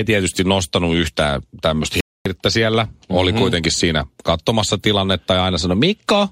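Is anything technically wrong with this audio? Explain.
Yes. At about 2.01 s the speech drops to silence for 250 ms, resuming at 2.26 s, a dropout consistent with a Bluetooth stall. The likely cause is radio interference delaying packets until the headphones' buffer emptied, so playback paused until retransmissions arrived. It is heard as an abrupt hole in the speech. On a waveform it shows as a flat line between sharp edges; on a spectrogram, a clean vertical blank band across all frequencies.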